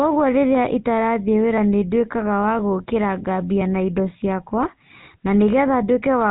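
From start to finish the speech carries the sound of the GSM full-rate codec, and the damage is plainly audible. The coder rebuilds the voice from a vocal-tract filter excited by regularly spaced pulses, keeping only a decimated part of the excitation, so the voice takes on a buzzy, gravelly roughness. The band stops at about 3.9 kHz, dulling sibilants and removing air. The overall character fits the 13 kbps full-rate coder.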